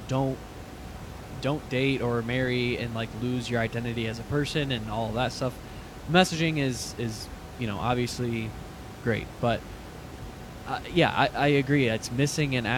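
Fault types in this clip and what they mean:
No fault types are present in the clip.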